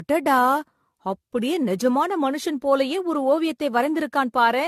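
Throughout, the speech sounds swirly, hollow and smeared, with blurred consonant attacks. This is generation loss, likely from roughly seven AAC-LC encodes at what fits 64 kbit/s. A spectrogram shows a hard ceiling at 14.1 kHz and pocked holes between harmonics, and waveform transients look rounded.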